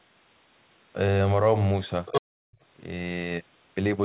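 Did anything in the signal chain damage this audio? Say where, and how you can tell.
Yes. In the call processing stage, from 2.06 to 2.22 s, there is other side's voice leaking through. A second voice appears at roughly the same level as the speech. This is likely loudspeaker playback reaching the microphone that the echo canceller failed to subtract.

Right after that, from 2.22 to 2.6 s, the background is gated by the echo canceller. The room sound drops by up to about 40 dB for around 0.4 s, then returns. The canceller clamped the microphone gain while it judged the far end active, then released it.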